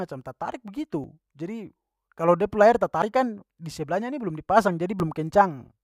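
The recording was likely cut into 2-second chunks, dropping a brief sliver of about 20 ms at each handover. In this speech, audio missing between chunks shows as abrupt skips at 1.04, 3.02 and 5.0 s, spaced two seconds apart, each closed with no gap.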